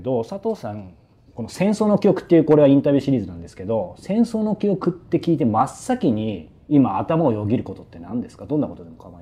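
No technical faults can be heard anywhere in this audio.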